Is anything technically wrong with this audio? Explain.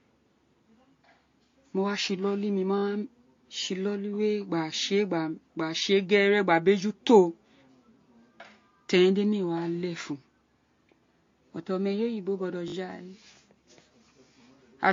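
Yes, there are two faults.

Throughout the speech, the transcoding between lossy codecs is audible: nothing is present above 7.2 kHz, and smeared, swirly artefacts are layered over each other. This is likely an MP3 encode at around 48 kbit/s re-encoded to AAC-LC at a similar rate, with each pass adding its own damage.

From 12.68 to 12.74 s there is a repeated buffer. When new audio failed to arrive, the same short slice was played four times in a row with hard joins, giving a quick buzzy stutter that fits a 20 ms buffer. Little or no audio appears to be lost.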